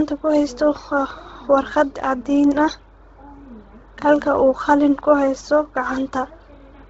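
From start to end, nothing sits above 7.8 kHz, and the upper band turns grainy and breathy, noise-filled rather than cleanly filtered: likely heavy Bluetooth LC3 compression.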